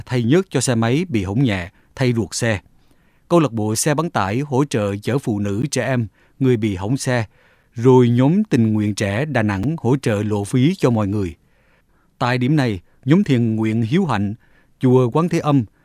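A speech clip with a gap between stream segments: the time stamps of consecutive 2-second segments leave small holes that the player fills with silence. Short, hard-edged dropouts interrupt the sound at 5.62, 7.63 and 9.63 s, about 13 ms, then 6 ms each, with nothing actually lost.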